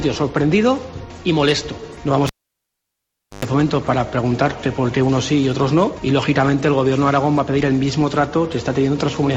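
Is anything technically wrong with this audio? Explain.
Yes. From 2.27 to 3.45 s a cable is pulled and plugged in while live: a pop, 1.13 s of near silence, then about 110 ms of 50 Hz mains buzz as the plug tip alone makes contact, and a second pop when full connection restores the sound.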